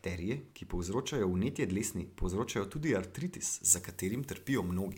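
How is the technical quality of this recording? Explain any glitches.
The recording has one clear fault near its end. From 3.64 s to 4.97 s, after "dlesni povzročajo tudi artritis", the speech turns thin, bright and sibilant. This is pre-emphasis left on: treble lifted about 13 dB at 10 kHz, fitting a 75 µs FM curve, with no matching de-emphasis.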